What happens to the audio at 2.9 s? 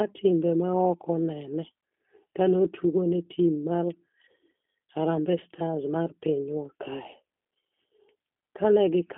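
At 2.9 s, as across the whole clip, the speech carries G.729 codec damage. The coder rebuilds each 10 ms frame from a vocal tract filter, a pitch predictor and a few pulses, so the speech sounds rough and slightly synthetic, which fits an 8 kbit/s codec. A spectrogram shows a telephone band from about 250 Hz to 3.6 kHz, with a hard ceiling and nothing above 3.7 kHz.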